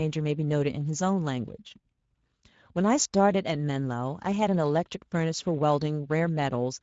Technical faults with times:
0.00-6.83 Speex codec

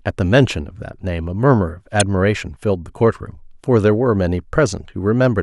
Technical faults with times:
2.00 damaged data in a compressed stream

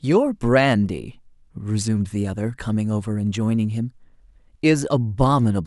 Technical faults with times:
none

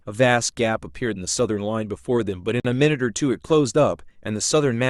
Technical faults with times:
1.39 underrun with held sample
2.60-2.65 Bluetooth stall

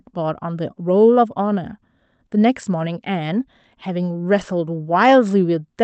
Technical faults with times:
none

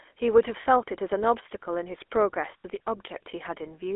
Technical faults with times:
0.00-3.95 GSM full-rate codec
0.62-0.65 lost GSM frames
2.58-2.65 lost GSM frames

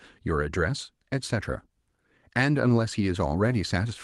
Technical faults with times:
none

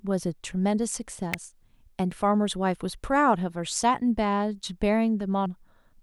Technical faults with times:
1.34 electrical switching spike
2.11 damaged data in a compressed stream
5.46 damaged data in a compressed stream

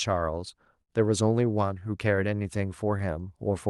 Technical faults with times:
0.00-3.69 clock drift between sender and receiver
0.57-3.69 repeated timing corrections
0.82-0.91 short stall from a late packet

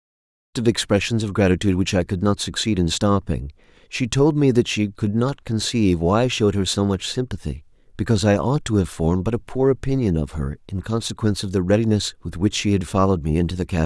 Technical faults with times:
none

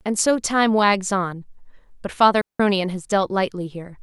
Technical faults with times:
2.41-2.60 digital wireless dropout

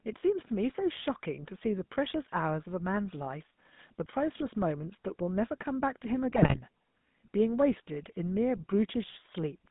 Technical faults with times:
0.00-9.70 GSM full-rate codec
6.33-6.59 GSM bit errors

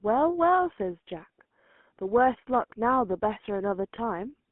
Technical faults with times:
0.00-4.52 GSM full-rate codec
3.96-3.99 lost GSM frames

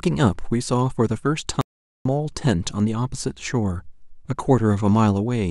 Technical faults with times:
1.61-2.05 audio dropout to silence

